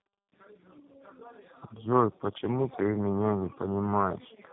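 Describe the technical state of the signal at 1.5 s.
At 1.5 s, like the whole clip, it's tandem speech coding. Two low-rate speech codecs in a row, likely AMR-NB then G.729A, stack their damage, leaving rough, warbly speech with nothing above 3.7 kHz.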